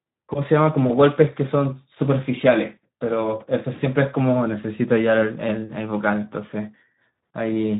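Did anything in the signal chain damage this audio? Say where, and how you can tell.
Yes, the Speex codec stage: throughout, the speech sounds hoarse and noisy, with nothing above 3.8 kHz. Starved CELP excitation points to a low setting around 11 kbps.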